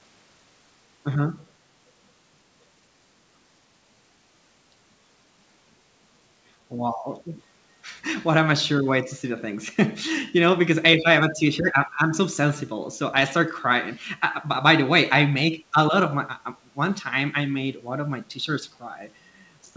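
Speech recorded through a call, band-limited to 8 kHz, with two brief echo leaks at 8.18 to 8.26 s and 11.67 to 11.72 s: faint scraps of the voice returning about 234 ms late, around 30 dB and 25 dB below the speech, likely from a far-end speakerphone whose echo canceller let residue through.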